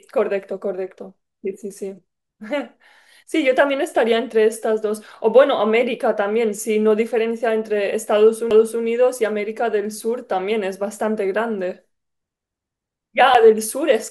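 Two CD skips in this speech, at 8.50 s and 13.34 s: the laser jumps track, giving a brief mute, a tick, and the speech resuming elsewhere.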